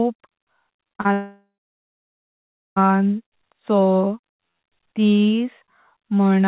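From 0.76 to 1.08 s there is repeated packet loss, with the robotic sound typical of it: about half a dozen short holes, none longer than roughly 36 ms, each patched by stretching the previous sound, so nearly 40 percent of that span is filled-in buzz. The gaps are brief and recur, which separates this from a single dropout.

Straight after, from 1.13 to 2.82 s, comes what is likely a long network dropout. The last sound is drawn out into a fading buzz, then about 1.3 s of silence follows before the audio resumes, with that stretch simply missing. One sustained gap, not a chain of small ones, marks this as a dropout rather than repeated loss. The narrowband call path, with nothing above 4 kHz, carries both events.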